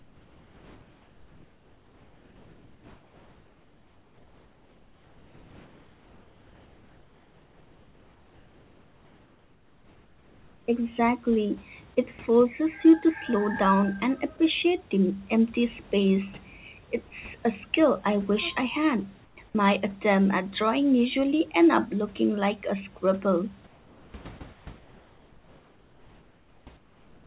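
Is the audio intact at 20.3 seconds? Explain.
Yes, the audio is intact at 20.3 seconds, with only the narrowband call path and faint room noise well below the speech audible there.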